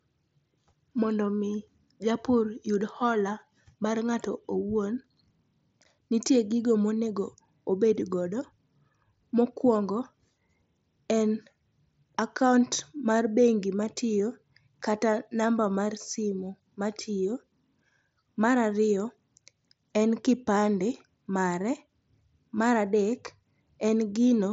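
Nothing is technically wrong with this speech clip.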